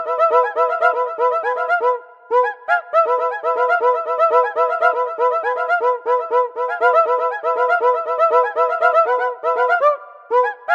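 No audible faults anywhere in the clip: nothing drops out, jumps, distorts or glitches at any point.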